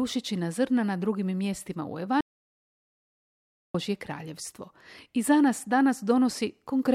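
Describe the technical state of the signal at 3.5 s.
At 3.5 s the signal sits inside an audio dropout to silence running from 2.21 to 3.74 s, about 1.54 s in total. The speech cuts out mid-flow and the gap carries no room tone at all before the voice returns abruptly. The likely cause is a lost input, whether a disconnected device, a failed link or a stray mute, while recording continued. On a waveform the span is a flat line; on a spectrogram, a blank vertical band.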